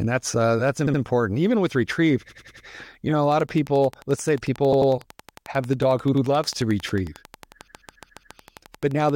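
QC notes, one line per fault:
0.86, 2.28, 4.72, 6.13 and 7.66 s, repeated frames: blocks of 70 to 140 ms replay one to five extra times each, causing stutters and lengthening the audio.
3.32 to 9.11 s, train of clicks: regular ticking at 11.3 per second, about 50 clicks peaking a few dB above the speech, likely from nearby equipment interference.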